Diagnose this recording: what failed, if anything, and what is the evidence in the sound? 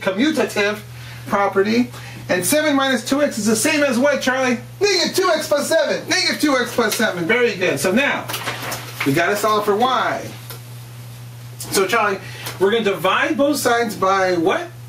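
Gain pumping runs throughout the recording. The gain swings by around 10 dB, so loud and soft passages sit unnaturally close in level and the whole sound feels squashed. The likely cause is input gain set far too high for the microphone at the analogue stage, with a fast limiter or compressor clamping down on each peak and releasing quickly afterwards.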